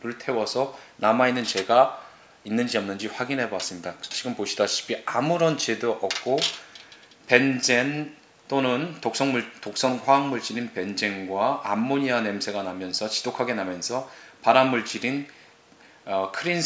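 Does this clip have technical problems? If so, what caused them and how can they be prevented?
No, there are no technical problems to report in this clip. Nothing needs to be caught or prevented here.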